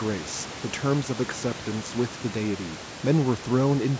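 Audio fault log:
No faults heard in this speech recording.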